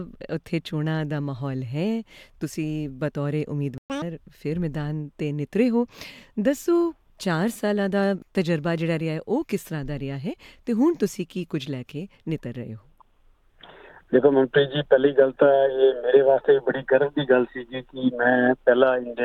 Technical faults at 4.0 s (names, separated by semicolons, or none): catch-up at higher speed